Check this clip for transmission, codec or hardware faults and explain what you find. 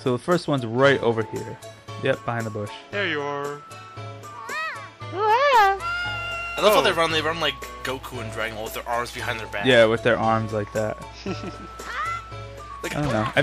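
Nothing in the clip points to a fault. There is no event here that needs a time or an explanation.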